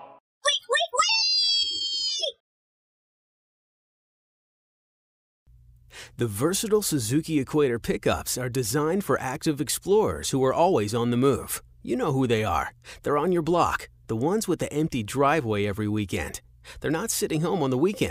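Nothing goes wrong anywhere in this clip, so there's nothing to point out.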